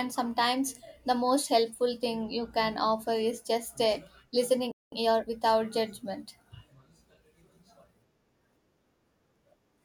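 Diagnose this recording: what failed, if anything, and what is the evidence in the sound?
Playback stall at the playback stage: the speech drops to silence from 4.72 to 4.92 s, about 200 ms, likely from a starved output buffer or blocked player thread.

Time-compressed catch-up follows from 4.92 to 5.32 s: the speech runs 1.5 times fast at normal pitch, as the player cross-fades out short segments to clear its backlog.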